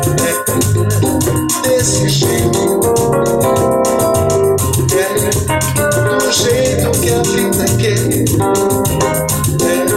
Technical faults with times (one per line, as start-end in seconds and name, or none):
0.00-9.96 crude rate conversion